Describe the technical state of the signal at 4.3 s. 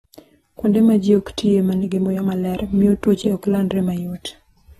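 At 4.3 s the speech sounds dull and smeared, with a fizzy, warbling edge on sibilants and nothing above 12.4 kHz, as it does throughout the clip. The likely cause is AAC compression quantising the spectrum coarsely and cutting the top band, consistent with about 36 kbps.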